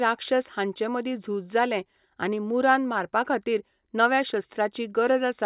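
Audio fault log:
No audible faults detected.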